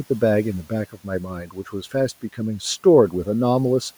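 From 0.92 to 1.74 s there's speech cut by the noise suppressor. It mistook part of the speech for the room noise sitting about 26 dB below it and pulled them both down, by about 12 dB at worst. Roughly half a second of sound comes out swallowed and faint.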